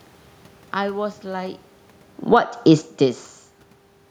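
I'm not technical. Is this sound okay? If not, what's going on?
No. From 2.18 to 2.49 seconds there is automatic gain falling: the recorder decides the sound is too loud and turns itself down over about a third of a second. The room's background noise drops along with the voice, which shows it's the equipment, not the person.

Then, from 2.4 to 2.95 seconds, there is automatic gain rising: the incoming sound gets much quieter, so the recorder turns itself back up and voice and background swell together. When the talker moves around 1.5 and 2.5 seconds, only the voice changes.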